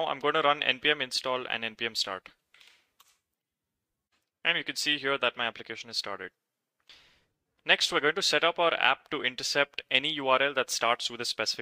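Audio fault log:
1.23 s, corrupt frame muted: a very short hole in the sound, only a few milliseconds long, that begins abruptly with no fade and ends just as suddenly, with everything after it arriving on time. Damaged bits in the compressed stream made the decoder reject the affected data, and the player filled the gap with silence rather than guessing. The brevity of the hole fits a couple of rejected frames.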